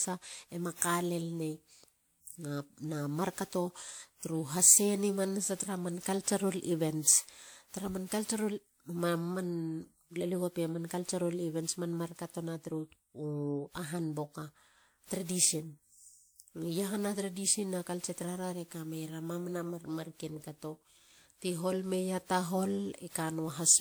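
From start to finish the speech has a swirly, hollow, smeared quality, with consonant attacks blurred and nothing above 20.1 kHz. That's likely generation loss, around ten re-encodes through a lossy codec resembling 128 kbit/s WMA, each pass stacking fresh quantisation noise and holes.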